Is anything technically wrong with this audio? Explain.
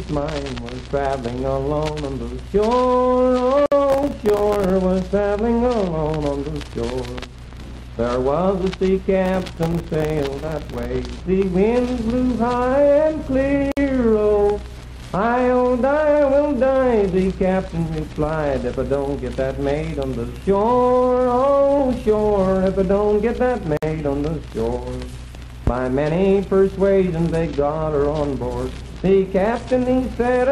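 Yes. There are two problems.

Gaps at a join of encoded pieces appear at 3.66, 13.72 and 23.77 s, every 10 s. Each is a single silence of about 54 to 58 ms, left where separately encoded pieces were joined without trimming their padding. The sound then resumes where it stopped, unlike a skip.

Processor overload crackle runs from 3.90 to 4.70 s and from 9.26 to 10.85 s. Many tiny buffers, fitting roughly 1.5 ms each, miss their deadlines and drop to silence, giving a gritty tearing rather than one clean hole.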